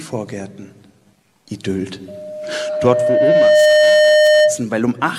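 From 2.08 s to 4.63 s a loudspeaker feedback squeal builds at 609 Hz: the microphone re-captures its own loudspeaker until the loop gain passes one. Over roughly a second and a half it swells to about 10 dB above the sound, one steady pitch, unlike a constant hum.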